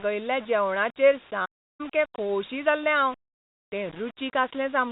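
Low bit depth without dither runs through the whole speech clip: quiet passages turn gritty and grainy, with distortion that shifts along with the voice and sits only about 20 dB below it. The likely cause is rounding to around 6 bits with no dither, so the error tracks the signal rather than staying a steady hiss. The narrow telephone band of the G.711 coding can be heard beneath it.

A playback stall follows from 1.45 s to 1.81 s, where the sound cuts out mid-flow for about 0.34 s before carrying on. This points to the player likely running short of data or being blocked until it recovered.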